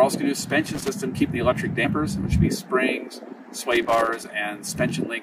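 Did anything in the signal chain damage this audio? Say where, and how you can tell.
Yes. At 0.42, 1.84 and 4.67 s the audio jumps ahead, losing roughly 100, 50 and 100 ms. That's compressed frames skipped in the codec or storage stage: whole 23.2 ms frames missing or rejected.

The analogue wiring is at fault too, with loose connector crackle from 0.66 to 0.88 s and 3.72 to 4.24 s. Those irregular scratchy bursts come from a dirty or worn contact making and breaking as it moves, chopping the signal.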